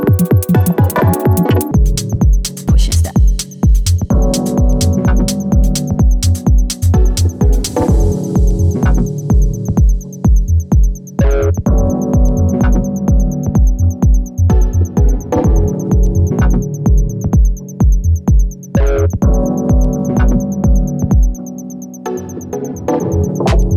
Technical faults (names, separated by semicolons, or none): audio read two samples at a time (double speed)